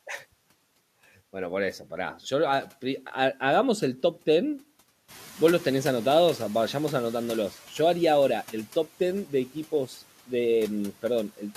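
Just after 5 s the room noise in this speech recording jumps by about 12 dB. The noise suppressor is caught out. Its noise estimate still reflects the quieter room. From 5.08 s the louder noise comes through with little reduction. The suppressor is catching up. Over about 2.45 s its estimate climbs. The noise sinks gradually, by about 6 dB. By 7.53 s it settles, about 22 dB below the speech.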